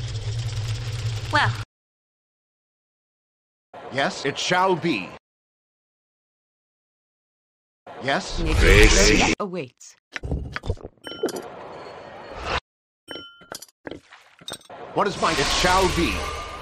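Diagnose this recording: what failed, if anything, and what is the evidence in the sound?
Nothing failed; no faults detected.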